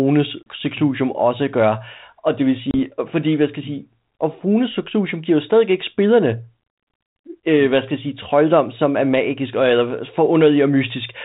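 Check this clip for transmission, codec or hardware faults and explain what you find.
Two short transmission faults are audible, both packet loss on an ADPCM call. The first gap runs from 0.43 to 0.46 s and the second from 2.71 to 2.76 s. Each drops about 30 ms of audio, a few packets' worth, and replaces it with a hard-edged silence. In ADPCM the receiver's predictor and step size build on every previous sample, so after each hole they no longer match the sender's. The speech therefore comes back slightly distorted before settling within some tens of milliseconds. That disturbed resumption separates it from a simple dropout or buffer gap, where the sound returns cleanly. Throughout, the speech carries the band-limited, lightly noisy character that points to G.726 ADPCM at 32 kbit/s.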